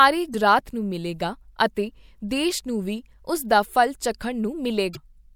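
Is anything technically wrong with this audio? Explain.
Yes. Two short disruptions interrupt the speech, one at 0.30 to 0.35 s and another at 4.93 to 4.97 s. Each is a brief glitch lasting roughly 40 ms. These point to damaged data in a compressed stream. At those moments some of the compressed bytes are corrupted, so the decoder misreads those frames, loses its place in the stream and has to search for the next valid frame header before clean playback resumes.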